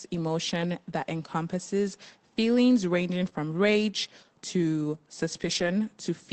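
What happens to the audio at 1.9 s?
Nothing goes wrong at 1.9 s: the speech there is intact, carried through the WebRTC call path with the band-limited sound of a call codec, topping out at about 8 kHz.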